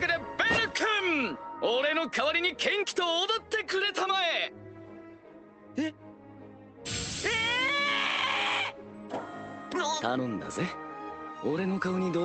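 Nothing here stands out as a fault: the audio simply carries the coloring of a call codec, with the top end stopping at around 8 kHz, which fits a modest call bitrate.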